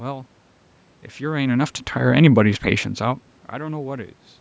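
Nothing stood out on listening to this speech recording.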